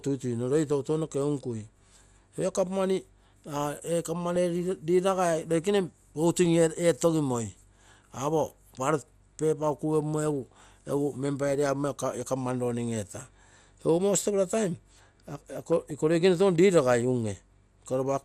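Throughout the speech the sound is dull, with a gurgling, granular edge, likely MP2 compression at a rate around 80 kbps leaving upper sub-bands switched off and coarsely quantised. At 4.36 s a brief few watery blips of DAB burbling appear, and from 15.43 to 15.91 s a longer bubbling, chirping stretch follows, where bit errors slipping past error correction corrupt the audio data, putting short blips of noise in single sub-bands.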